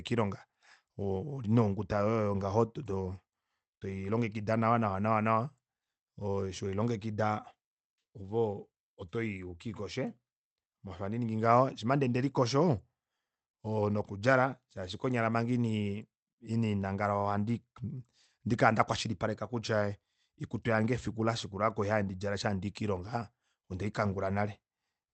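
No technical faults can be heard anywhere in the speech. It has come through a WebRTC call path working as intended, with the codec's usual coding noise and nothing above 8 kHz.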